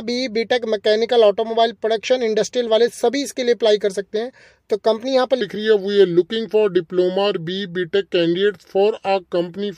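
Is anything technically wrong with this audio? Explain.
Yes. From 5.41 s to the end, a section at the wrong speed plays back at 0.839 times its recorded rate, likely from being clocked against the wrong sample rate. Tempo slows and pitch drops together, about three semitones, so the sound turns deeper and more drawn out.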